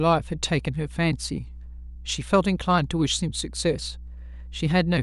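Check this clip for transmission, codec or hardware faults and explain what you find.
One fault runs through the whole speech clip: mains hum. A steady low drone sits under the speech from start to finish, pitched at 60 Hz with some low harmonics above it, and it is fairly prominent, roughly 15 dB below the speech level. That fixed frequency points to power-line interference, where a ground loop or a nearby transformer couples the 60 Hz supply into the signal path.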